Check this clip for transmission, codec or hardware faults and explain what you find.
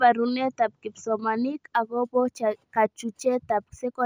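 One fault is present: imaging from linear upsampling, from 1.75 s, just after "barunetab kipsomanink", to the end. The 16 kHz audio was raised to 44.1 kHz by straight-line interpolation, so the top of the band dulls while a faint mirrored copy sits between 8 kHz and 16 kHz, about 35 dB down, giving sibilants a light metallic shimmer. Unlike aliasing, this added energy lies only above the original 8 kHz band edge.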